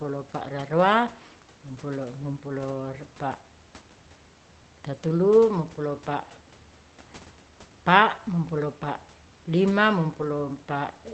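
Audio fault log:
No faults heard in this speech recording.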